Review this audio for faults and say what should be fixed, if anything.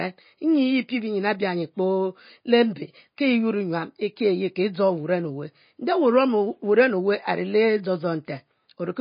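Throughout the speech, nothing is heard above 5.1 kHz, and what remains swirls and sounds watery, with smeared consonant attacks. This is MP3 compression, likely at a starved bitrate around 24 kbps: short of bits, the encoder cuts the treble and drops weak frequency lines that flicker frame to frame. A plain low-pass filter would dull the top without that swirl. Encode at a much higher bitrate, or keep a lossless master.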